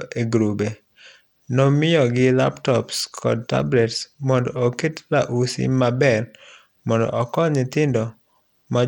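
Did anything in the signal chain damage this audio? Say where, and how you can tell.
Yes. The damage is at the codec stage and lasts the whole clip. The speech sounds gritty and grainy, and its treble thins and flickers. This likely comes from Bluetooth SBC compression, at a starved rate near 96 kbps. Too few bits reach the top sub-bands.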